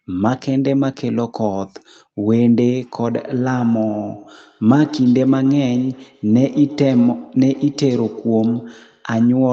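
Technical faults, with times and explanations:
3.1–9.4 s, feedback echo between two devices: each stretch of speech returns at a steady interval of about a tenth of a second, reaching about 16 dB below the direct speech. A second device in the same room is playing the call back into an open microphone, whose echo canceller only knows its own playback and lets this copy through. Each pass goes back through the Opus call path, whose upper limit of 8 kHz shapes the returning sound.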